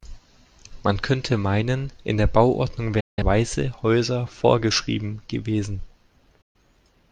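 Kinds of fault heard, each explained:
Digital broadcast dropout: the receiver lost decodable frames and muted until good ones returned, so the speech fades out within about 8 ms into silence twice, at 3.0 s for about 0.17 s and at 6.41 s for about 0.13 s, with that audio gone.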